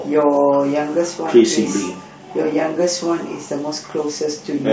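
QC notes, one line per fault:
No fault found.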